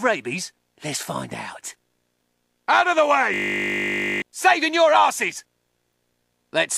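From 3.34 s to 4.22 s there is a system hang loop. The machine stalled while the hardware replayed one 20 ms buffer 44 times, giving a steady 50 Hz buzz. Unlike a dropout it never goes silent, yet roughly a second of audio is lost.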